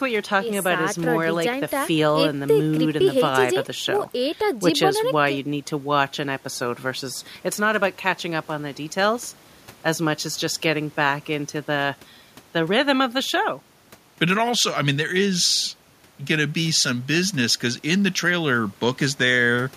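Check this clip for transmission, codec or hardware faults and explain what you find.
Nothing in this recording points to a fault. Listening closely across the whole speech passage turns up no event worth reporting.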